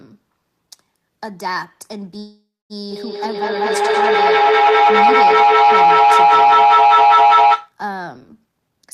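A short speech recording shows three call faults. Packets were likely held up in transit at 2.19 s, draining the receiver's jitter buffer, so a call audio freeze follows: the last sound is stretched into a fading buzz for about half a second, near-silent for its final 240 ms, before speech resumes at 2.73 s exactly where it stopped, now running about half a second late with nothing lost. From 2.91 s to 7.80 s, two devices in the same room are looped through the call, each microphone-to-speaker pass adding gain, which produces feedback howl: a tone around 700 Hz pulsing roughly every fifth of a second and peaking about 14 dB above the speech. Finally, from 8.46 s to 8.87 s, an overfilled jitter buffer sheds excess delay by cutting pitch-period slices, a jitter buffer speed-up that trims about a fifth of a second and makes speech play at 143% speed, hurried but at unchanged pitch.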